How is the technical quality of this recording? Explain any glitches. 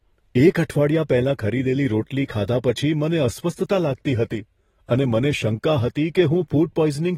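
The recording has plainly audible codec damage from start to finish. Throughout, the speech was likely passed through AAC compression: the encoder, short of bits, quantised its frequency lines coarsely and cut the band, leaving nothing above 16.5 kHz. The sound is dull and smeared, with a fizzy, warbling texture on sibilants, which fits AAC-LC at a low bitrate around 24 kbps.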